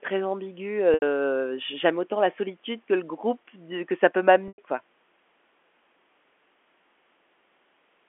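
At 0.94 s and again at 4.48 s the audio shows packet loss with pitch repetition. Roughly 80 ms and then 100 ms of the stream never arrived, and the receiver filled each gap by looping the last pitch period while fading it down. Both sound like a brief held, buzzy tone, the second slightly longer and decaying further, before the speech resumes through a short cross-fade over the band-limited telephone-coded line.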